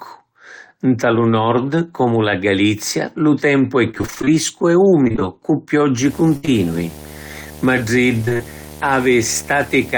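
Right after "lu tempu è", from 3.91 to 4.29 s, there is repeated packet loss with a robotic sound. Short dropouts of up to about 23 ms follow one another closely. The receiver fills each one by extending the previous sound, so nearly half of the stretch is synthesized continuation and about 0.2 s of real audio is missing. The result is choppy and robotic. The same pattern returns from 5.05 to 5.23 s, over a shorter span with about 0.1 s lost.

From 6.04 s to the end of the clip a video or display buzz sits under the speech. A screen or video cable is coupling into the audio path and puts a buzz at a 75 Hz field rate, with harmonic hash above it, roughly 20 dB below the speech. It is a steady, gritty hum that does not follow the talker's level.

Inside that buzz, from 6.37 to 6.45 s, a burst of packet loss removes about 60 ms of audio. The decoder holds the last sound and fades it as the gap runs on, so the sound turns into a brief sustained buzz or fading hiss, and then the speech resumes with that segment gone.

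Straight after the burst, from 6.45 to 6.49 s, comes a short concealed packet loss of about 20 ms. The hole is filled by continuing the preceding sound and then blending back into the real signal. It is heard as a quick smear or wobble tacked onto the end of the burst, and a brief consonant there can drop out.

The robotic packet-loss pattern appears once more from 8.25 to 8.41 s. A few gaps of up to about 26 ms leave roughly half of that span concealed and about 80 ms missing, which gives the same choppy, robotic texture as the earlier episodes.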